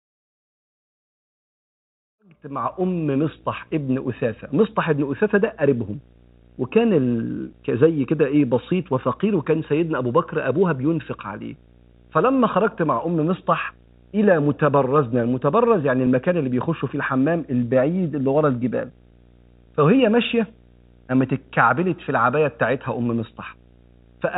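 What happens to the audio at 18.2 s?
At 18.2 s the speech carries a low 60 Hz buzz with hash above it, sitting about 30 dB below the speech. This is video or display buzz: a screen or video cable is coupling its 60 Hz field-rate interference into the audio, and it is present throughout the clip.

Repeated timing corrections also run through this point, spanning 0.12 s to 24.06 s. The receiver keeps trimming short pieces of audio at uneven intervals, all in the same direction, to keep pace with material arriving at about 104% speed.

Those corrections come from clock drift between sender and receiver. The sender's clock runs roughly 4% fast, so the jitter buffer keeps overfilling, and the receiver discards small slices to hold its level steady.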